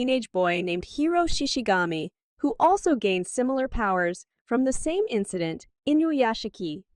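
From 2.65 s to the end at about 6.96 s, de-emphasis was applied wrongly: a treble-cutting filter acted on speech that either carried no pre-emphasis or had already been de-emphasized, pulling the response down smoothly to about 10 dB below 1 kHz at 10 kHz. The speech turns dull and muffled.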